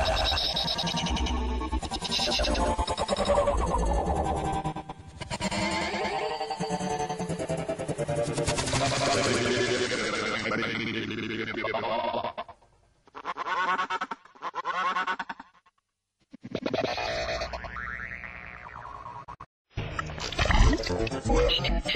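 The signal shows no technical faults at any point, with no breaks, level problems or distortion present anywhere in the audio.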